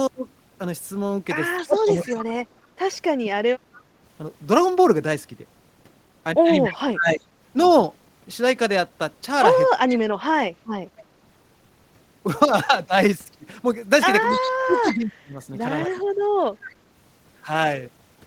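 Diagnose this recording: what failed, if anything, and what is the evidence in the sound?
Echo leak at 1.57–3.82 s, 6.64–6.75 s, 9.92–11.02 s and 14.29–16.75 s: a faint delayed copy of the speech trails it by 275 ms, some 15 to 20 dB down. This is a call-processing fault, likely a far-end echo canceller letting loudspeaker pickup through.

Speech suppressed in double talk at 1.66–3.29 s, 6.69–7.28 s, 9.74–10.39 s and 14.4–15.96 s: the speech dips and breaks up by around 20 to 25 dB. This is likely the canceller treating overlapping talk as echo and attenuating both at the call-processing stage.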